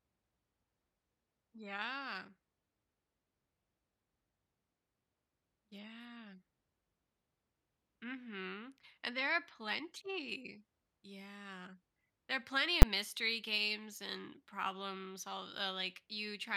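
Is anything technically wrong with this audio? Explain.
Yes. At 12.82 s, between "there are plenty" and "mystery games and problems", there are invalid numbers at full scale. A calculation produced infinite or invalid values that were forced to the maximum sample value, pinning a 10 ms block at full scale. Because the block is so short, it sounds like a single sharp bang. Ordinary clipping would flatten only the loud peaks of the speech, but here the whole block jumps to the rail regardless of how loud the sound was.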